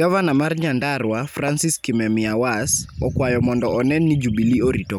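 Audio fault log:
1.48–1.50 s, loud pop: a single sharp pop about 10 dB above the speech, lasting roughly 20 ms, with the speech continuing uninterrupted underneath. The cause is likely a sudden voltage step or pulse, such as from a plug, a switch, static or a driver glitch, added to the signal and shaped by the circuits after it. Unlike a dropout or a splice click, nothing is removed from the speech, and there is one thump rather than a gap.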